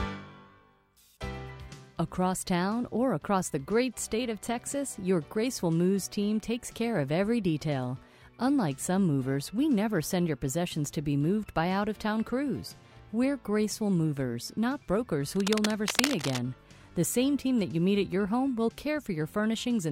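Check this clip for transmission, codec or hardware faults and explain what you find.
One hardware fault stands out: cable scratch noise from 15.36 to 16.39 s. For about a second, dense, irregular bursts of scratchy rustling sit over the sound, only a little quieter than the sound itself. The likely cause is a worn cable, connector or control being moved, so its contact resistance jumps around rapidly. Unlike a single click or a clean dropout, the disturbance is a rough, uneven cluster of crackle, and it stops once the movement does.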